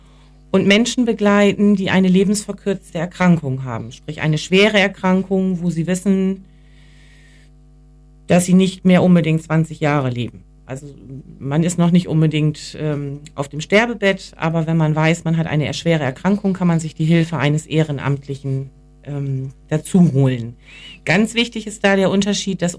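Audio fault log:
No audible faults detected.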